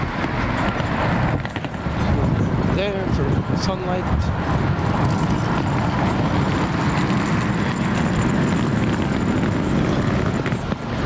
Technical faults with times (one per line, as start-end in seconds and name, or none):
0.00-11.05 gain pumping